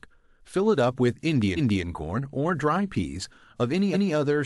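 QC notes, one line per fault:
1.56 to 1.84 s, repeated frames: a 0.28 s block of compressed frames plays twice, so the speech stutters back over itself. On the waveform a 0.28 s stretch appears twice in a row. On a spectrogram the same harmonic pattern repeats. The length fits a run of six frames.
3.93 to 4.11 s, repeated frames: a 0.19 s block repeats once, giving a shorter stutter. On the waveform and spectrogram it shows the same duplicated pattern. The length points to four frames.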